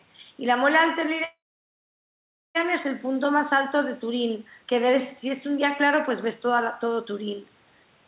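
A speech clip carried over a call path whose G.711 mu-law coding cuts everything above 4 kHz. From 1.24 to 2.57 s there is a call audio freeze, likely from packets held up until the jitter buffer ran dry. A short fading continuation gives way to about 1.17 s of silence, and then the speech resumes exactly where it stopped. Unlike a dropout, nothing is lost; the remaining audio simply arrives about 1.3 s late.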